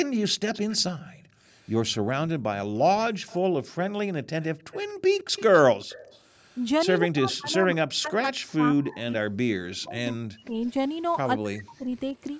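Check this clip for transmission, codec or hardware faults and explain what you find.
Yes, there are clear echo-canceller problems here, all three of the classic kinds, on a call band that tops out at 8 kHz.

Echo leak shows up at 0.54–1.95 s, 3.27–3.37 s, 4.42–6.99 s and 9.85–9.91 s. It's a faint copy of the speech trailing by 159 ms, roughly 20 to 30 dB down. That's likely a speakerphone whose canceller let some of the loudspeaker pickup slip back down the line.

Background gated by the echo canceller happens at 0.99–1.41 s and 3.49–4.64 s. The room tone ducks by up to about 40 dB, for about 0.2 s in total the first time and 0.3 s the second, as the canceller clamps the mic while the loudspeaker plays and then releases it.

Speech suppressed in double talk hits at 7.0–10.56 s and 11.37–12.15 s. The talker's voice sinks by as much as roughly 40 dB, about 3 s of damage in the first stretch and half a second in the second, likely while the other side is also talking.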